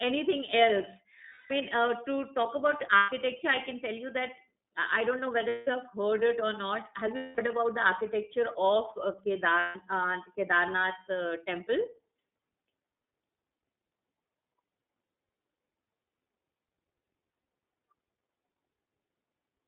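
The whole clip is speech carried through the iLBC codec. The band runs only from about 200 Hz to 3.7 kHz, so the voice sounds thin and boxed in. Each frame is coded on its own. That leaves a rough, slightly synthetic edge on every syllable. The damage is plainly audible. The texture fits the 13.33 kbps mode with 30 ms frames.

Lost iLBC frames then break the speech five times. The first runs from 1.28 to 1.51 s. The next runs from 2.97 to 3.09 s, just before "i can tell". Another comes at 5.49 to 5.68 s, right after "I don't know". Then 7.16 to 7.41 s, before "about the". The last runs from 9.60 to 9.78 s. Each gap lasts 120 to 210 ms. The decoder fills it by repeating the last pitch cycle mixed with noise. It sounds like a held, buzzy vowel. The voice comes back cleanly at once.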